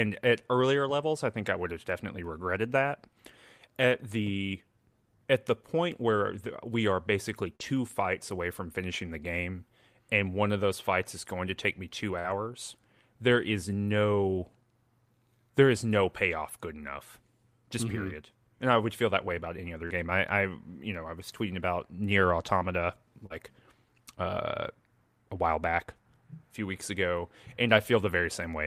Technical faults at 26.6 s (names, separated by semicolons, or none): none